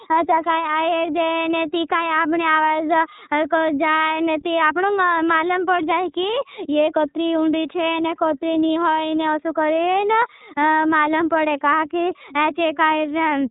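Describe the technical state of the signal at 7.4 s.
At 7.4 s the speech carries iLBC codec coloration, present across the whole clip. Each frame's excitation is coded independently at a rate that fits 13.33 kbps with 30 ms frames, leaving nothing above 3.8 kHz and a plainly audible rough, synthetic edge.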